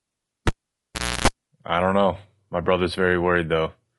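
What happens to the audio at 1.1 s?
At 1.1 s the cable is pulled and plugged in: a pop at 0.47 s, near silence, then roughly 0.3 s of 60 Hz mains buzz as only the tip touches, and a second pop at 1.28 s before "I don't know." The buzz between the pops sets it apart from a simple dropout. Throughout, the sound is rough and grainy, with noise between harmonics and a lowered or synthetic top band, likely from low-delay AAC compression (AAC-ELD near 32 kbps), not ordinary background hiss.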